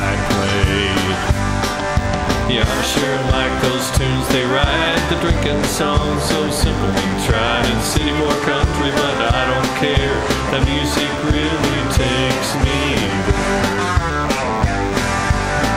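From start to finish a DECT cordless phone buzz sits under the sound, well below it at roughly 25 dB down. A nearby handset or base station transmits a brief radio burst every 10 ms, and the audio circuitry rectifies each one, producing a thin, steady 100 Hz buzz rich in harmonics. On a spectrogram it appears as evenly stacked horizontal lines at 100 Hz multiples running the full length; zoomed into the waveform, small regular spikes recur every 10 ms.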